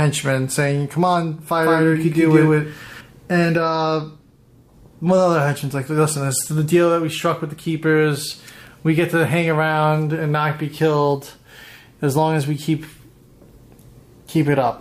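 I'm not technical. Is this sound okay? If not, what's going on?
No. From 1.63 to 3.01 seconds there is a doubled audio track. The same sound plays twice, the second copy about 0.15 seconds behind and just as loud. It starts and stops abruptly. Likely a second capture path or an editing slip.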